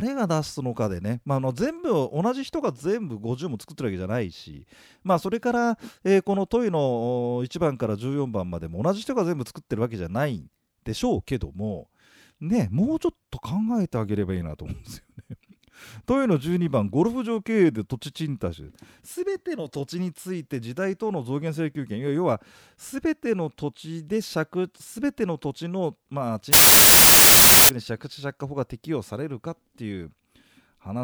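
From 26.53 to 27.69 s the speech turns into loud broadband noise, a wrong sample width that fits 32-bit samples read as 16-bit. The buried voice plays at half speed, an octave low. The waveform jumps in level and the spectrogram fills evenly.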